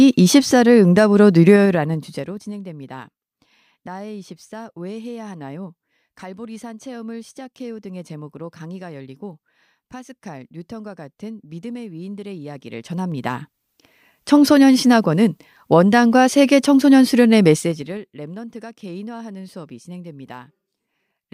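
Gain changes in this speech clip jump in unsmoothed 2 dB steps, producing zipper noise: a ticking over the roughly 20 dB level moves at 1.52–2.50 s, 12.48–13.95 s and 17.54–18.07 s.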